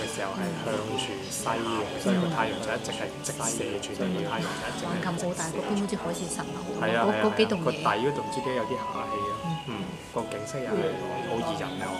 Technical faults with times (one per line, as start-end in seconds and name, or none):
0.00-5.80 doubled audio track